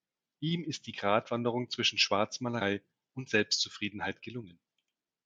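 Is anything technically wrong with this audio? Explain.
Yes. At 2.60 s the speech jumps ahead by about 70 ms, roughly three compressed frames of 26.1 ms, with compressed frames skipped by the decoder. A waveform shows an abrupt discontinuity, and a spectrogram shows a thin vertical smear.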